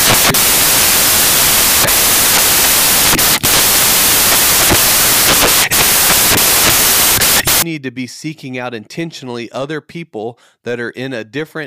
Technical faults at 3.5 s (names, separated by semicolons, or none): samples built from the wrong bytes